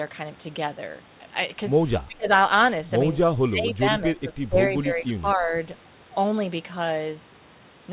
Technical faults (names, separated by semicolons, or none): speech suppressed in double talk